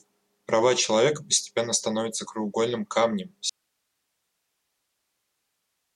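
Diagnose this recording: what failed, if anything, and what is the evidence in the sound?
The speech cuts out abruptly at 3.50 s and does not return before the end of the recording. This is an audio dropout to a faint residue: from that point only hiss remains, roughly 50 dB below the speech level, with no fade or natural pause leading into it. The stage is likely analogue wiring, such as a disconnected cable or failed connector ahead of a still-running input, leaving the preamp amplifying its own noise floor.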